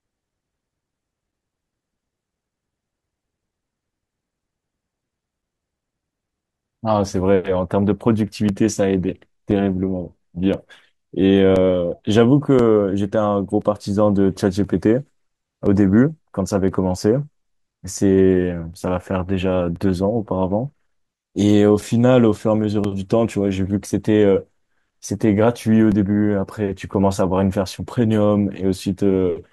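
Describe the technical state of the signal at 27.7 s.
At 27.7 s the speech is within a run of periodic USB or driver dropouts lasting from 0.30 to 28.99 s. Every 1.024 s a few milliseconds of audio are blocked and replaced by silence. Each gap is heard as a regular tick while speech sounds.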